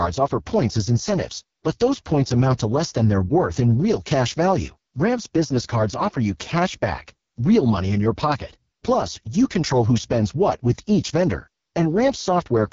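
From start to finish the speech carries heavy AMR wideband (HD Voice) codec damage. Nothing reaches above 7.1 kHz. The top band is filled with shaped noise, not real detail. The speech sounds rough and raspy, which fits the lowest 6.6 kbit/s mode.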